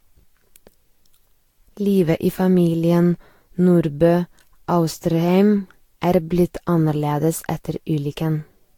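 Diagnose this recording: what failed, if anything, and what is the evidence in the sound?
Codec stage: swirly, hollow smearing with blurred attacks throughout, likely generation loss from about seven re-encodes near 70 kbit/s; spectrogram shows spreading holes, nothing above 19.1 kHz.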